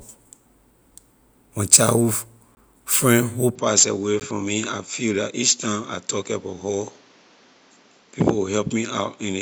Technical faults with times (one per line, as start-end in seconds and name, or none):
2.55-2.57 block of digital silence
3.55-9.42 input switched to a poorer device
4.20 block of digital silence